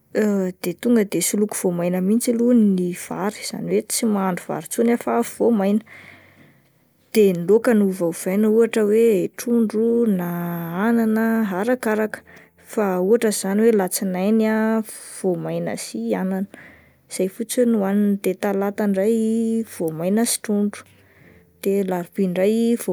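No technical faults can be heard anywhere in the speech recording, and the signal holds steady throughout.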